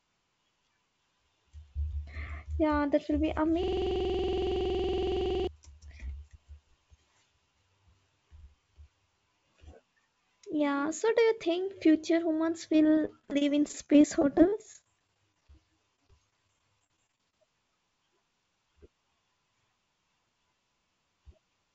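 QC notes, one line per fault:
3.63–5.47 s, system hang loop: the same 46.44 ms slice of speech repeats roughly 40 times, so you hear a rough buzz at about 21.5 Hz. The system froze while the hardware kept replaying its ring buffer, which fits a 2048-sample buffer.
12.73–15.55 s and 15.96–17.34 s, repeated packet loss (robotic sound): dozens of brief dropouts, none longer than 33 ms, each patched by stretching the last bit of sound. About 17% of each stretch is filled in, so the speech turns choppy over the 8 kHz-limited call audio.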